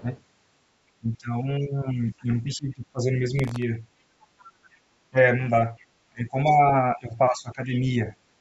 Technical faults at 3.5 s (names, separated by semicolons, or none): speech suppressed in double talk; processor overload crackle